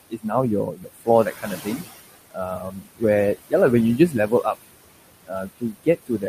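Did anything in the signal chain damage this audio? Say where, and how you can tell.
Yes. Noise suppressor artifacts come from call processing. The room noise, about 14 dB below the speech, drops by about 19 dB between phrases and returns beneath them. It pumps frame by frame instead of holding steady.

Speech cut by the noise suppressor occurs at 0.1–0.32, 0.65–1.08, 1.25–1.9, 2.57–3.03 and 3.98–4.56 s, and from 5.25 s to the end. Speech sinks with the background by about 12 to 22 dB and sounds swallowed. That sets it apart from quiet talking, where the background would stay level.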